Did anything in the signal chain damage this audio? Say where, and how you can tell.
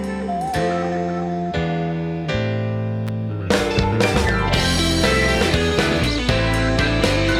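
Yes, in the analogue wiring. At 3.07 s a sharp snap sits on top of the sound, peaking around -15 dBFS and lasting less than 20 ms. That profile points to an electrical switching spike: a nearby switch, motor or static discharge likely arced, and the audio line picked up that burst as an added voltage. Because the interference is summed in rather than replacing the signal, the underlying sound continues through the click.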